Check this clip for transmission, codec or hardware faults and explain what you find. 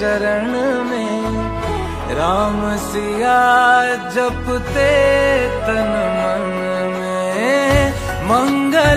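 No faults turn up anywhere in the clip.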